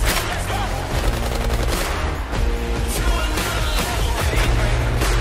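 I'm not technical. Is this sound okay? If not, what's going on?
No. From about 0.52 s to the end, there is a crude rate conversion. Samples were copied or skipped to change the sample rate, likely from 44.1 kHz to 48 kHz. That leaves a gritty, fizzy buzz clinging to louder and brighter sounds.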